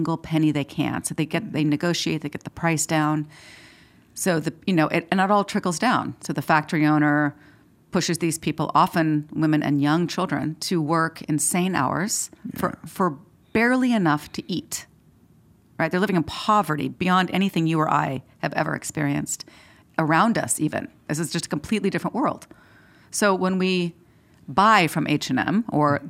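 Nothing in the recording stood out as a technical problem on listening.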